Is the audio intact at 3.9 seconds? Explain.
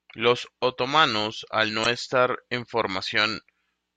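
Yes, the speech at 3.9 seconds plays through cleanly, with no dropout, click, distortion or other fault at that point.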